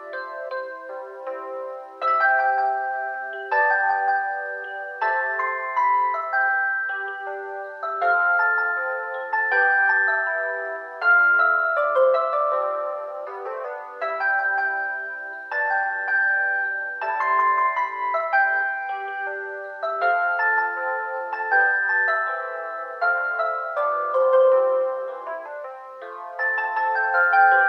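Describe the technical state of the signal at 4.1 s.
At 4.1 s the signal is intact, with no audible fault at that moment.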